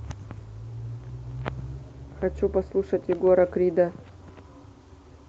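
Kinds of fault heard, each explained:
No faults heard.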